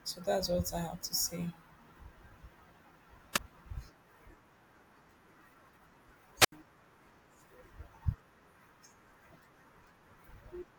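Speech with two wireless microphone squelch dropouts, at 3.34–3.39 s and 6.39–6.52 s. Unlike a digital dropout, each brings a rise of hiss before the receiver mutes, for about 5 ms and 77 ms.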